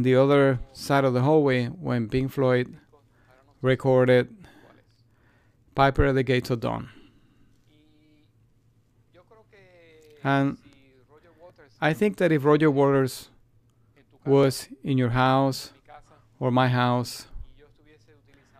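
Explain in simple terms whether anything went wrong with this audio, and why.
Two devices likely ran on slightly mismatched clocks, causing clock drift buffer slips: a regular click about every 2.94 seconds, roughly seven times, from 2.69 to 17.37 seconds.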